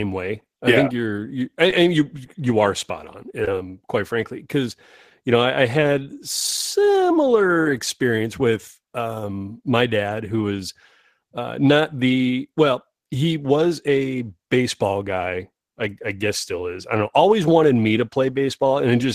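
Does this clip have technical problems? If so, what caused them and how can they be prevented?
Yes. Three brief smears interrupt the speech: at 1.70 to 1.73 s, between "think you're you I" and "you you are spot"; at 3.45 to 3.48 s, just before "um quite frankly because"; and at 7.63 to 7.66 s, just before "experience with um my". These are short concealed packet loss. In each case about 20 ms of audio arrived too late or not at all, and the receiver covered the gap by extending the preceding sound before blending back into the real signal. Preventing this means giving the call a steadier network path, such as a wired connection, less competing traffic or a larger jitter buffer, so that packets arrive in time.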